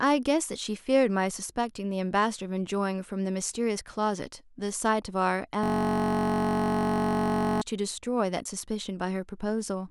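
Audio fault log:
5.64–7.61 s, system hang loop: the system or driver froze while the sound hardware kept cycling its ring buffer, so one 21.33 ms slice of speech, which fits a 1024-sample buffer, repeats 93 times and becomes a steady buzz at 46.9 Hz.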